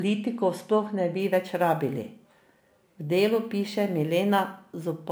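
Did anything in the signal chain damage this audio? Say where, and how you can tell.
Yes. From 1.20 s to the end of the speech clip, a gritty, inharmonic fizz rides on the louder and brighter syllables, about 30 dB below the speech. This is crude rate conversion at the sample-format conversion stage. Samples were simply repeated to the nearest position, which fits a 32 kHz to 44.1 kHz change, so the error recurs in a fixed pattern and produces unrelated tones. Unlike codec artefacts, it doesn't swirl or smear. It tracks the signal level steadily.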